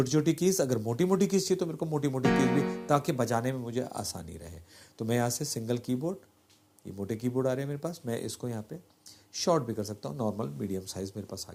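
No dropouts, clicks, distortion, level jumps or timing errors turn up anywhere in the recording.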